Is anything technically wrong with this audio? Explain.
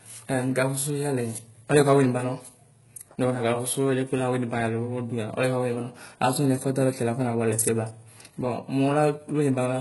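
Yes. Throughout the speech, s sounds come out gritty and lispy, the treble sounds metallic and synthetic, and nothing reaches above 11.5 kHz. This is likely HE-AAC compression, heavily applied at what sounds like about 12 kbps, rebuilding the treble from copied lower bands whose harmonics don't match the original.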